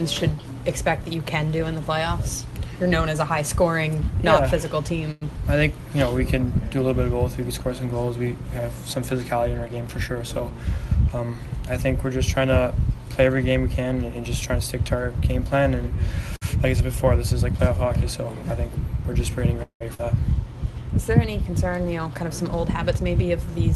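Audio that's come through a call path, where the codec tops out around 12 kHz, and it has a handful of jitter-buffer problems. There are two short stalls from a late packet, at 5.11 s and 16.36 s: the sound just hangs for about 0.1 s and then 55 ms while the receiver stretches the last bit until the packet turns up, then carries on with nothing lost. Jitter buffer speed-up kicks in from 10.08 to 11.21 s at 109% speed, and again from 21.72 to 23.51 s at 104%. Both times the receiver trims pitch-period-sized slivers, roughly a tenth of a second in total, to shrink a backlog, so the first one sounds a bit hurried at the same pitch. At 19.63 s there's a call audio freeze lasting 179 ms, likely packets held up in transit emptying the buffer: the last sound gets carried on, fades, and drops to silence for about 100 ms before picking up where it left off. Right after that, at 19.94 s, there's a skip ahead: around a tenth of a second of audio goes missing and the two sides butt together almost directly, shedding some of the delay the freeze had just added.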